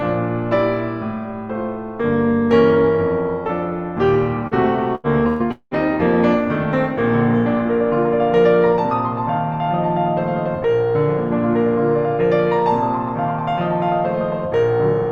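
At 4.47 to 4.54 s the music briefly smears, as if a sliver of it were stretched and then dropped back into place. This is short concealed packet loss: about 40 ms of audio never arrived in time, so the receiver invented a stand-in by carrying the last sound forward, keeping its pitch where there was one, and then crossfaded into the real signal once it resumed.

Only a moment later, from 4.95 to 5.78 s, the music turns choppy, with pieces missing. This is repeated packet loss: four separate holes open up in quick succession, the longest about 195 ms, and together they account for roughly half of that stretch. Each hole is patched by extending whatever sound came just before it, and the next loss hits before the real music can settle back in.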